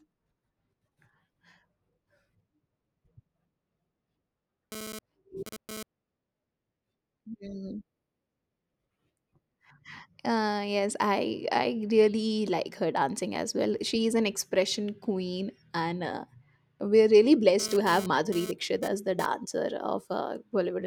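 A harsh, raspy 217 Hz buzz, about 12 dB below the speech, appears from 4.72 to 5.83 s and again from 17.60 to 19.26 s, right after "and uh we're really". This is GSM phone buzz: a nearby 2G phone's intermittent data bursts are being rectified by the audio circuitry.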